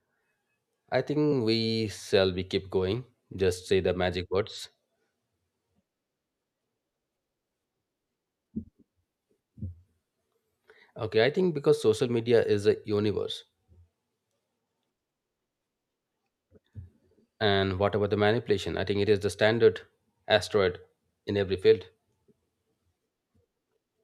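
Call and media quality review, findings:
Compressed frames skipped at 1.31 s, just before "we shall be keep": speech jumps forward by around one frame, about 20 ms, consistent with a 24 ms codec frame. Decoder dropped a missing or damaged frame.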